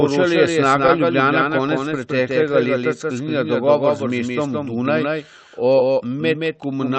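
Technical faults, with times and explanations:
Throughout: doubled audio track. The same signal is likely reaching the mix twice, once directly and once through a slower path, so a second full-band copy trails the first by around 150 ms, roughly 5 dB quieter. Because the copy carries no decay or room colour, it does not sound like reverberation. It sounds like a hard, flat echo, with every syllable onset smeared into a distinct second attack just behind it.
Throughout: clock drift between sender and receiver. The sending device's audio clock runs about 2% slow relative to the receiver's, so audio arrives slightly too slowly to keep the jitter buffer full. The receiver has to keep stretching what it has to avoid running dry. This shows up as small timing hiccups scattered unevenly across the whole clip instead of one obvious glitch.
0.10 to 6.77 s: repeated timing corrections. To cover the slow sender, the receiver keeps repeating short slices of audio, all in the same lengthening direction. 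The net effect is playback at 98% speed, which adds about a tenth of a second over the stretch. Each repeat is tiny and irregularly spaced, so it registers mostly as a faintly uneven, dragging tempo, with occasional slight stutters, behind the Opus call path's band limit near 8 kHz.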